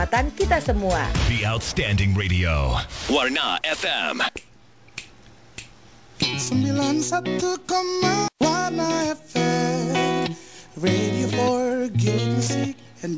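No faults found; the audio comes over a call path with nothing above 8 kHz, which fits a wideband codec such as G.722 at 64 kbps.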